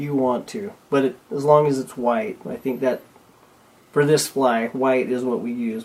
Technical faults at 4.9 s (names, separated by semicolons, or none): none